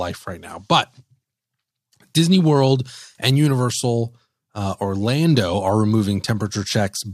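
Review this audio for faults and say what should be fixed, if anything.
Nothing stood out on listening to this speech recording, so there is nothing here that needs fixing.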